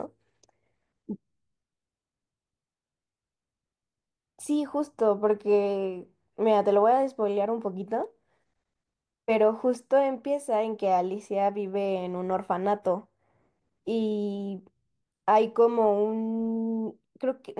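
No technical faults can be heard anywhere in the recording; the speech signal stays intact and continuous throughout.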